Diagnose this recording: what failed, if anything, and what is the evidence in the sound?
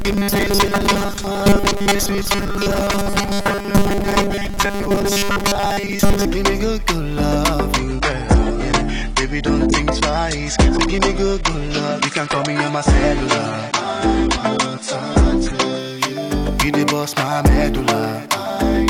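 From 0.01 to 6.27 s the sound is a rigid, metallic buzz locked at 200 Hz that only loosely tracks the material. That's robotic sound from repeated short buffers, likely at the driver or buffer stage: a 5 ms chunk gets replayed over and over while most of the real audio is skipped.

Between 7.79 and 15.79 s the treble suddenly stops at about 10.2 kHz and the top end gets swishy and artefact-heavy, with no gap either side. That's an adaptive stream at a lower bitrate at the network stage, pointing to a switch from around 96 down to 32 kbit/s AAC while the connection sagged.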